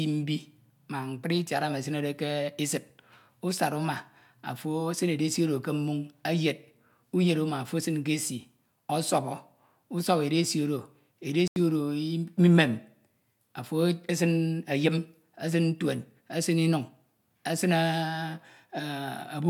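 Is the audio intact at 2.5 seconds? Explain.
Yes, the speech at 2.5 seconds is intact, with no dropout, click, distortion or other fault to be heard at that moment.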